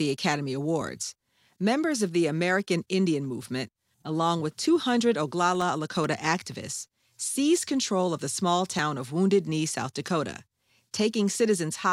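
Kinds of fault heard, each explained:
Overlap between stream segments: at about 0.82, 4.80, 6.81 and 8.79 s, roughly 25 ms of speech is cut away where 2-second segments meet, heard as tiny clicks or skips. The waveform shows abrupt discontinuities, and the spectrogram shows thin vertical broadband lines.
Processor overload crackle: from 5.55 to 6.04 s, missed processing deadlines leave a handful of sub-millisecond silent gaps with hard edges, heard as a brief gritty crackle. The waveform shows tiny flat dropouts, and the spectrogram shows a scatter of narrow vertical streaks.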